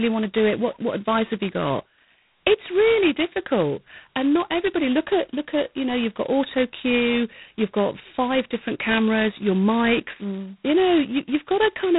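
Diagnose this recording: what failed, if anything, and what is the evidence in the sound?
The codec stage failed. G.726 ADPCM damage runs through the whole recording: a coarse, rasping hiss rides on the speech, swelling on louder syllables and dropping back in pauses. The coder sends only a few bits of difference from its adaptive prediction per sample, so quantisation noise tracks the signal. The heaviness fits the 16 kbit/s mode. A spectrogram shows a hard ceiling at 3.9 kHz and grainy noise filling the band beneath each syllable.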